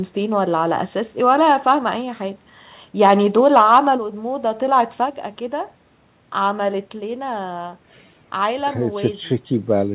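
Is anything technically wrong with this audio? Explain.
No, nothing's wrong here; the speech just has that narrowband phone-call sound, with nothing above about 4 kHz, which is what you'd expect from a standard telephone codec on a call path.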